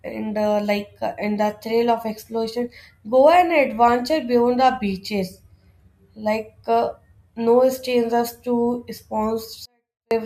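A speech clip in which, from 9.66 s to 10.11 s, the level suddenly collapses by about 48 dB, leaving the audio clean but barely audible before it ends. This is a 24-bit alignment error (too quiet): samples held as 24-bit integers in the low bytes of a 32-bit word are being read as full 32-bit integers, so every value sits eight bits too low. That shift scales the signal down without distorting it.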